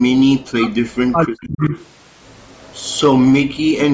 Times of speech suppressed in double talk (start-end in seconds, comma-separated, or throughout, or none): 0.31-1.74, 3.39-3.89